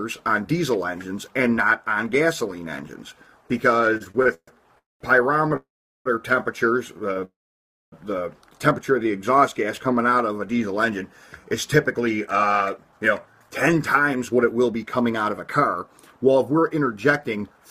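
From 3.95 to 5.52 s there are repeated stalls (stutter): nine brief gaps, the longest 133 ms, are filled by continuing the last sound. Unlike a single freeze, the audio keeps dragging and catching in small, frequent hitches.

Call audio freezes are heard at 4.78–5.02 s, 5.56–6.07 s and 7.25–7.94 s, lasting 222, 490 and 676 ms. In each, the last sound fades into a silent stretch of 190, 400 and 600 ms before the audio resumes where it stopped. The likely cause is packets held up in transit until the jitter buffer ran empty.

A short stall from a late packet at 7.13–7.18 s stretches one sound by 21 ms, a slight hold and buzz rather than a fade to silence.

From 9.03 to 10.35 s a jitter buffer slow-down plays the audio at 95% speed, adding 79 ms by repeating pitch periods. The pitch stays unchanged and the sounds are drawn out.

From 11.98 to 17.66 s a jitter buffer speed-up runs the audio at 108% speed, cutting roughly 0.4 s in total. 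It sounds hurried at an unchanged pitch.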